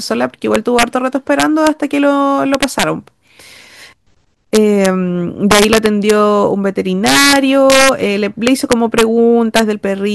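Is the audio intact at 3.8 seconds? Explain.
Yes, the speech at 3.8 seconds plays through intact, with no audible fault at that moment.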